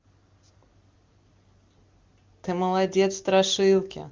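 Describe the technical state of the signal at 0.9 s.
At 0.9 s the speech is intact, with only the clear wideband sound of AMR wideband (HD Voice) coding, which fits a high bitrate.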